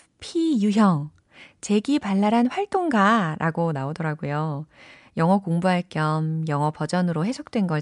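No technical faults turn up anywhere in the recording.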